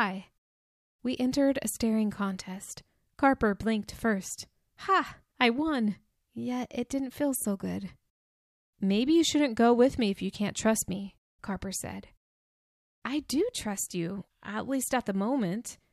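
No audible faults in this speech recording.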